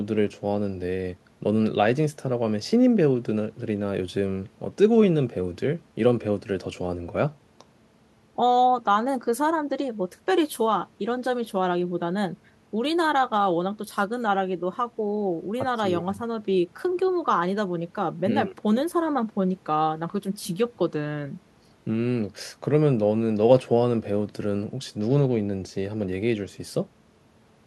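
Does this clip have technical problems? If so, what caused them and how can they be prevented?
No, nothing in this recording calls for a fix, so there is no cause to trace and nothing to prevent.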